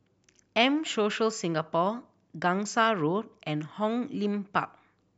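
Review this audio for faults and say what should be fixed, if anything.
No faults are audible in the audio, so nothing needs to be fixed.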